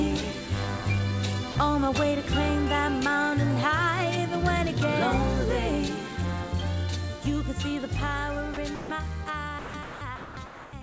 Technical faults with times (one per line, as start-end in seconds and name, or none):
1.52-1.55 sound dropped by the voice detector
8.54-8.90 sound dropped by the voice detector
9.59-10.82 sound dropped by the voice detector